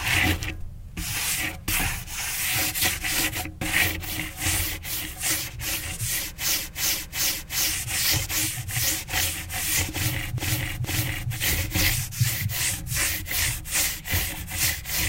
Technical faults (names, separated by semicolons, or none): repeated frames